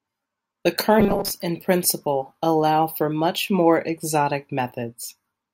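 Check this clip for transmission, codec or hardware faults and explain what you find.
One fault is audible in this speech clip: robotic sound from repeated short buffers. It runs from about 1.00 s to 1.31 s, ending just before "in principle allow for". The speech turns into a rigid, metallic buzz at 200 Hz that still roughly tracks the talking. The likely cause is audio arriving too seldom, so playback loops a 5 ms slice instead. Most of that stretch is repeats, and the real audio there is skipped.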